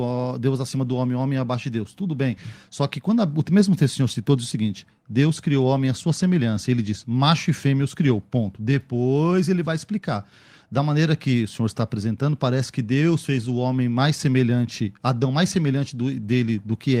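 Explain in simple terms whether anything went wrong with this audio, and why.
Nothing went wrong with this audio; I can't hear any technical fault anywhere in it.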